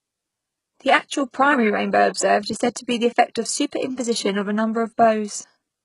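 Throughout the speech, s sounds come out gritty and metallic, and the treble has a synthetic sheen, with nothing at all above 11.1 kHz. The cause is likely HE-AAC compression at a very low rate, which fits a bitrate around 12 kbps. The codec keeps only the lower spectrum and fakes the top octave by copying lower bands upward under a coarse envelope, so the upper harmonics no longer line up with those beneath.

From 2.14 to 2.16 s, between "actual primary rainbow" and "is said to be", a brief hiss smears in ahead of a sharp onset, lasting about 21 ms, and the attack itself sounds blunted. This is pre-echo. The codec spreads its quantisation noise across a whole transform block, so noise sized for the loud attack late in the block also fills the quiet moment just before it.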